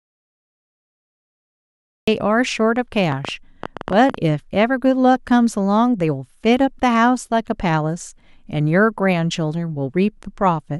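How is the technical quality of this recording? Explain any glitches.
The recording has two clear glitches. It opens with an audio dropout to silence and later has a burst of clicks.

From the start to 2.08 s there is silence with no room tone, so the speech is cut off, likely because the input was lost while silence was written.

From 3.12 to 4.15 s, a train of clicks sounds as around ten uneven pops, about 9.8 per second and roughly 10 dB above the speech. This is likely from interference or a faulty connection injecting pulses.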